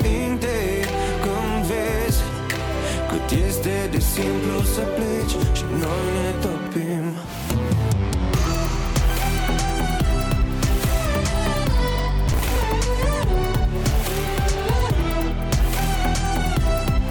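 From 12.28 to 12.65 s the sound breaks into processor overload crackle: around twenty short buffers, each roughly 5 ms, are skipped outright, leaving hard-edged gaps. The waveform shows tiny dropouts, and the spectrogram shows a dense cluster of thin vertical broadband streaks.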